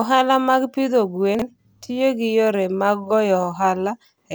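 Between 1.35 and 1.42 s, after "mag pidho" and before "tiyo gi yore mag", chunks out of order: a 23 ms chunk arrives two chunks late, so the speech briefly jumbles with three hard joins. Unlike a dropout, nothing is missing; it is reshuffled.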